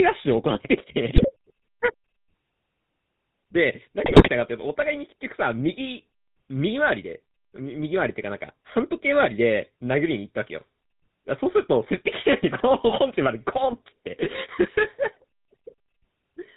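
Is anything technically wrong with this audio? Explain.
Yes. The speech has two problems: GSM full-rate codec damage throughout, and two short bursts of GSM bit errors.

The GSM full-rate codec colours the whole clip. It models the vocal tract and drives that filter with a regular pulse excitation that keeps only every third sample, so fine detail is lost and nothing above 4 kHz survives. The result is a plainly audible buzzy, gravelly roughness and a dull top end, which fits the 13 kbps full-rate mode.

GSM bit errors break through at 1.16 to 1.32 s and again at 4.04 to 4.29 s. Corrupted bits reached the decoder and scrambled its filter, pitch and gain parameters for several consecutive frames, so the spectrum twists and the level jumps erratically. Each burst comes out as squawking, popping and gargling. The second burst is longer, which points to roughly twice as many damaged frames as the first.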